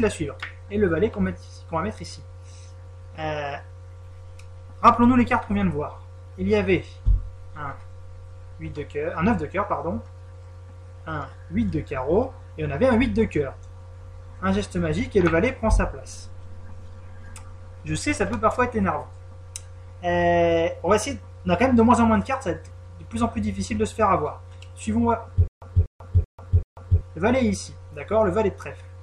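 From 25.48 to 27.01 s there is a stutter with silent gaps: a 242 ms burst of sound repeats four times, each followed by about 142 ms of digital silence, every 384 ms. A stalling stream replaying its last fragment is the likely cause. The waveform shows identical blocks separated by flat lines, and the spectrogram shows matching vertical slabs with blank gaps between them.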